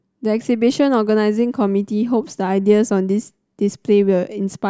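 No technical faults are audible.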